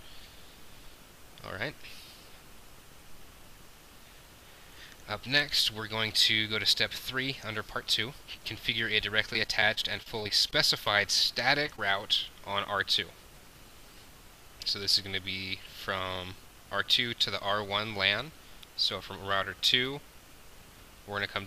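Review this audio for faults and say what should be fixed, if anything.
From 9.33 to 10.87 s there is repeated packet loss (robotic sound). Thirteen short holes, the longest 29 ms and about 190 ms in all, are each patched by extending the preceding sound, so about 12% of that stretch is synthetic fill. The result is choppy and mechanical. Unlike a plain dropout, the gaps are never silent: they are smeared continuations that recur too closely for the ear to bridge. A larger jitter buffer and a steadier network path would prevent it.

Short concealed packet loss occurs twice, at 11.66–11.68 s and 11.76–11.79 s, with about 10 ms and 20 ms of audio missing. Each time the receiver continued the last sound across the hole and blended back, which leaves a brief smear or wobble rather than a click or a silent gap. These two events are isolated, which sets them apart from the robotic stretch just before, where gaps pile up continuously. 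Forward error correction or redundancy on the transmission would recover these losses.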